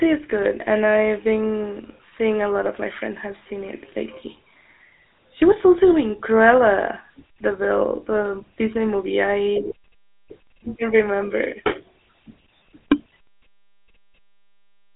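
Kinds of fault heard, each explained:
GSM full-rate codec: the speech runs through the whole clip with the buzzy, gravelly roughness of this early mobile codec. Its vocal-tract model driven by coarse, regularly spaced pulses is plainly audible. The band is held to a phone line's roughly 300 Hz to 3.7 kHz, with nothing above, and the sound points to a 13 kbps stream.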